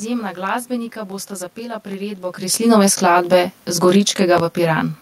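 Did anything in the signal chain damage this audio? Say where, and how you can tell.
Yes. Channel delay (comb filtering) runs throughout: one channel lags roughly 20 ms before the mono sum, carving evenly spaced notches from around 30 Hz upward, so the speech sounds rough or slightly doubled. This points to the driver or buffer stage.

Loud pops land at 1.91 to 1.94 s, just after "glasbenika bosta zapela", peaking about 5 dB above the speech, and at 4.38 to 4.40 s, about 10 dB above. They are sharp single pops over continuing speech, likely voltage transients in the analogue wiring.

Automatic gain falling from 2.41 to 3.07 s is a call-processing fault: the gain drops about 4 dB, and speech and room noise sink together.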